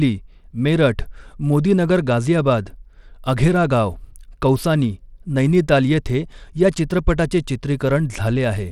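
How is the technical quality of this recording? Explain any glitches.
The technical quality is noticeably compromised. Throughout the speech there is plainly audible codec damage, likely from Bluetooth SBC compression. Nothing reaches above 17.2 kHz, and the coarse quantisation fits a bitrate of around 96 kbps. SBC has no hearing model, so its grit and treble flicker are not hidden behind the speech. Smarter codecs at similar rates tend to hide their losses behind louder sounds.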